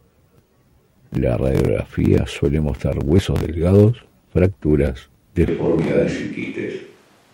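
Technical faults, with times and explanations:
5.48 s onward, switch to a distant microphone: speech abruptly turns roomy, hollow and bass-light at similar level, likely because a farther mic took over.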